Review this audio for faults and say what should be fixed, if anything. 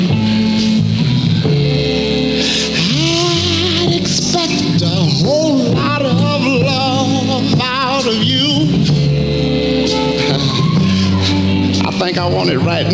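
Nothing stood out on listening, so there is nothing here that needs fixing.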